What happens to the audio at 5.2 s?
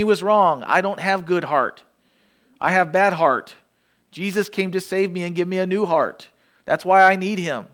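At 5.2 s the speech carries on cleanly, with no dropout, click, distortion or other audible fault at that moment.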